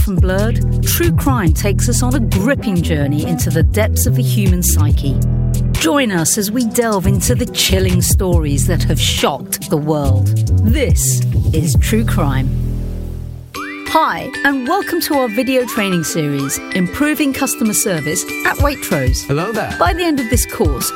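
Nothing here stands out as a technical fault; it just rolls along without any glitches catching the ear.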